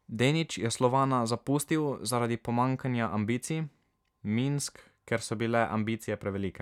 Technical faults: none

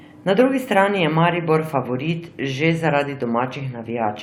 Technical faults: corrupt frame decoded

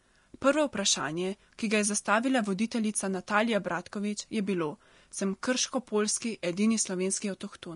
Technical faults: Vorbis compression

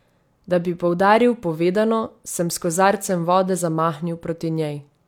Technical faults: clock slip clicks

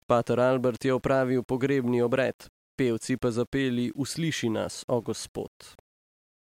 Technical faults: low bit depth without dither

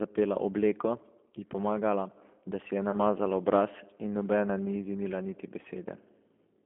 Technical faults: G.729 codec; VoIP packet loss concealed by the speech codec

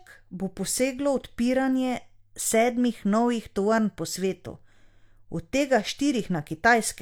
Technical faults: none

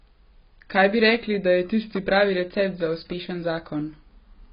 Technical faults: AAC compression

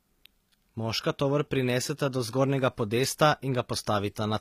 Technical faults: HE-AAC compression

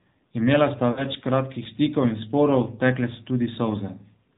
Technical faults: AMR narrowband mobile codec; lost AMR speech frames

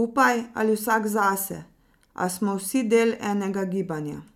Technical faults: none

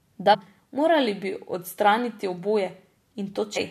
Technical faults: damaged data in a compressed stream

